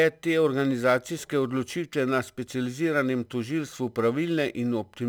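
From the first moment to the last, the speech carries a crude rate conversion. It sounds like a change from 44.1 kHz to 48 kHz done by simply repeating the nearest sample rather than filtering. That repeat pattern throws off shifted, inharmonic copies of the voice, sitting very roughly 30 dB below it. You hear it as a gritty, inharmonic fizz riding on the louder and brighter syllables.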